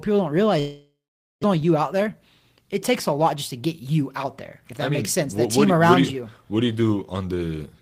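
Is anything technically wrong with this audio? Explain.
Yes. At 0.59 s, right after "people don't", the speech breaks off in a long network dropout lasting until 1.45 s. The last sound is stretched into a fading buzz for about 840 ms, with roughly 490 ms of near-silence, and about 600 ms of speech is lost. This is likely packets failing to arrive, with the receiver concealing the gap before resuming further on.

Jitter buffer speed-up follows twice, from 1.53 to 2.14 s at 109% speed and from 2.57 to 5.46 s at 105%, ending before "team what around you". The buffer, swollen by around 200 ms after the dropout, trims short pitch-period slices, removing about 70 ms and then about 150 ms, so speech sounds hurried at unchanged pitch.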